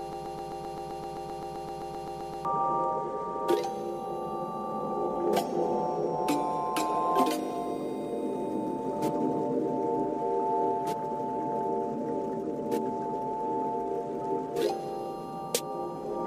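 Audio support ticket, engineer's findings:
Broken-record loop, 0–2.45 s, already under way at start: likely stalled stream resending its last fragment; 130 ms piece repeats 18 times, intended audio lost.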